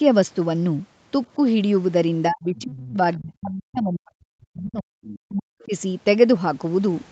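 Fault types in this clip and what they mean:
Speech suppressed in double talk: The speech sinks sharply from 2.28 to 4.95 s and again from 5.25 to 5.72 s. At its deepest it falls by about 40 dB, so parts nearly vanish. The first stretch covers about three seconds in all, the second about half a second. The likely cause is an echo canceller hearing both sides at once. It could not tell the local talker from the loudspeaker echo, so it turned both down.
Other side's voice leaking through: A second, fainter voice slips in twice. A short scrap sits at 2.56 to 2.61 s, about 25 dB below the speech. A longer piece runs from 5.03 to 5.36 s, about 20 dB down, just as the second dip begins. This is likely the far end playing on a loudspeaker and reaching the microphone. The echo canceller did not remove all of it, so remnants pass through.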